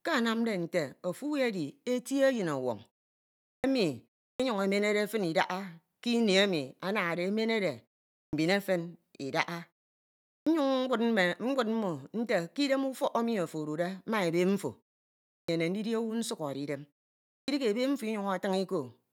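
Clipped starts after a pause occur at 3.55, 4.31, 8.24, 10.38, 15.39 and 17.4 s. The output sleeps through each silence and wakes late. About 80 to 95 ms of speech onset is swallowed, so words begin abruptly.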